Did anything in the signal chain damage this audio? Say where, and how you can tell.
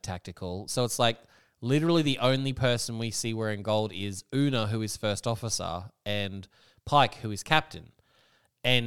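No, nothing along the way has left a mark I can hear on this speech; it comes through intact with nothing to point at.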